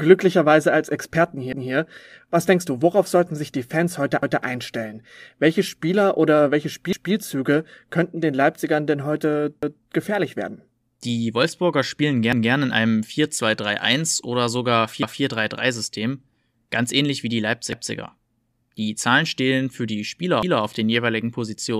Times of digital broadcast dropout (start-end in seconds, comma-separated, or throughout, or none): none